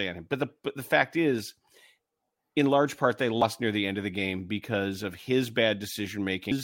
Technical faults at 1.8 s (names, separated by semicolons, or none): none